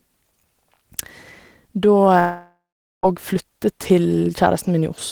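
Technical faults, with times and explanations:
2.19–3.06 s, long network dropout: the speech breaks off and the last sound is stretched into a fading buzz, then about 0.44 s of near silence. It resumes with roughly 0.84 s of speech missing, likely because packets stopped arriving and concealment ran out.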